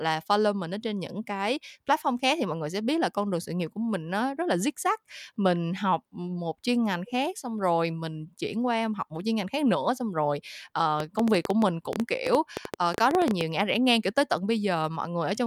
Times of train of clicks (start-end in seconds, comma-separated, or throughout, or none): 11.00-13.42